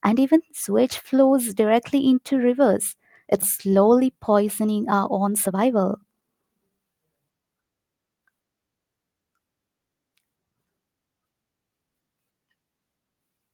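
A skip ahead at 3.41 to 3.43 s cuts roughly 0.7 s out of this speech recording: playback jumps straight from one point in the talk to a later one with no gap or fill, so a chunk of the utterance simply vanishes and the two sides butt together. Audio that was already queued was thrown away, either lost in transit or discarded when an overfull jitter buffer had to shed its backlog, and the delay drops by the same amount at that instant.

A jitter buffer speed-up follows from 5.18 to 6.80 s, where the speech runs at about 118% of normal speed while keeping its pitch and sounds noticeably hurried. The receiver was holding more audio than its target, so it repeatedly trimmed out short pieces one or a few pitch periods long, removing around 300 ms in total to pull latency back down.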